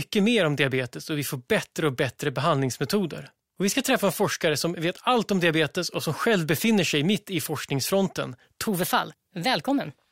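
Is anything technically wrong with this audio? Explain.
Yes. From 8.67 s to the end, right after "sig mitt i forskningsfronten", the speech turns hurried and roughly three semitones higher. This section at the wrong speed runs 1.16 times too fast, likely from playback or editing against a mismatched clock, so pitch and tempo rise together.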